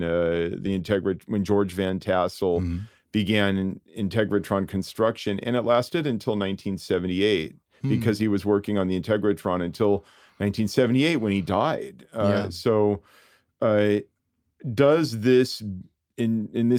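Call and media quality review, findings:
No faults found in the speech audio. Nothing to raise against any component in the call or media path.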